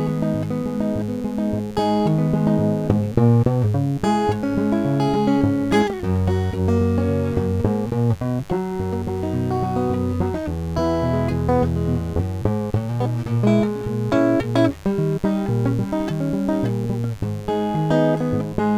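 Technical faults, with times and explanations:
Throughout, mains buzz: interference from the 50 Hz supply, picked up through a dimmer, rectifier or poor shielding, injects sharp spikes twice per cycle, so harmonics of 50 Hz stack up into the kilohertz range. That sits roughly 25 dB below the music as a steady, raspy buzz.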